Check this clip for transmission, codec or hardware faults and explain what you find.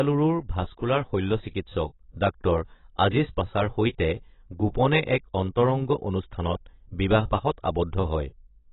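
One codec fault runs through the whole recording.

From start to end the speech has nothing above 3.9 kHz and is heavily damaged, most likely by AAC compression (AAC-LC). The damage fits a very low bitrate, near 16 kbps. Short of bits, the encoder drops the top band and quantises the remaining spectrum coarsely, so the speech sounds dull and smeared, with a warbling, fizzy edge on sibilants and held sounds. A spectrogram would show a hard ceiling at 3.9 kHz and patchy, holed energy below it.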